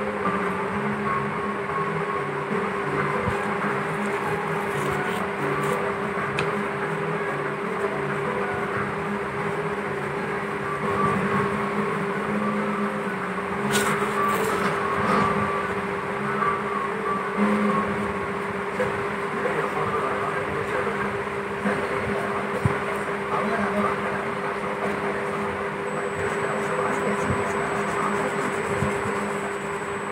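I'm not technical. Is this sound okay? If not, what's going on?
No. From 25.87 s to the end there is USB whine: a steady, very high 8 kHz whistle from a USB connection's power leaking into the audio. Unlike mains hum, which is a low drone, this is thin and shrill and never changes pitch.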